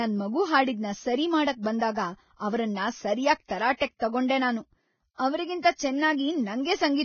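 Speech, degraded from start to finish by heavy codec damage. Nothing is present above 6.6 kHz, and the remaining treble sounds hissy and grainy, with roughened tones and blurred consonant attacks. This is likely Vorbis compression at a low rate, consistent with about 17 kbps.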